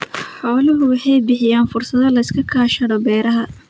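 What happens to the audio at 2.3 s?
The speech and its background are swelling together at 2.3 s, part of an automatic gain rising that runs from 0.41 s to the end, as the gain control lifts a too-quiet input.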